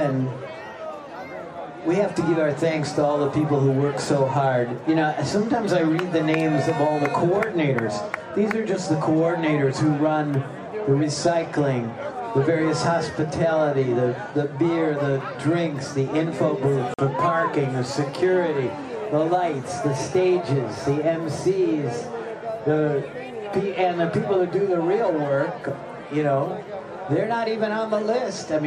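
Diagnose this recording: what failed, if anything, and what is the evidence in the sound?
A block of digital silence at 16.94 to 16.99 s: a 46 ms hard cut to zero, fitting one unfilled 2048-sample buffer. No fade or concealment marks this as a driver underrun, not network loss.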